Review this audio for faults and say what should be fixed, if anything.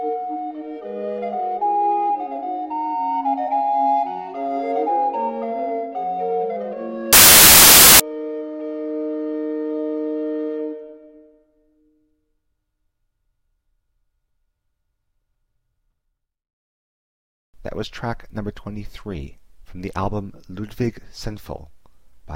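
From 7.13 s to 8.00 s the audio turns into loud, harsh broadband noise: samples built from the wrong bytes. For that stretch the reader assembles each sample from misaligned or misordered bytes, so the rapidly changing low-order bits end up in the most significant positions and dominate every value. The result is loud noise rather than the underlying signal, which returns once correct byte alignment resumes at 8.00 s. To prevent it, enforce the declared sample width, byte order and frame alignment at the decoder, and resynchronise on frame boundaries after any read error or seek.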